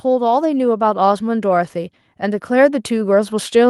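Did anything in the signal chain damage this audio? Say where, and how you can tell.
Yes: automatic gain rising in the call processing stage. From 0.05 s to the end at 3.69 s, the speech and the background noise swell together as the gain control lifts an input it judged too quiet. On a waveform the envelope and noise floor climb steadily; a spectrogram brightens across all bands at once.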